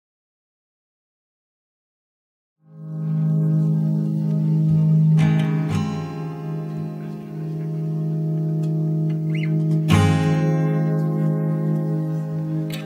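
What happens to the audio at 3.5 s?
At 3.5 s the audio is intact, still rising through a smooth fade-in that reaches full level at 3.75 s, with no click or hard edge.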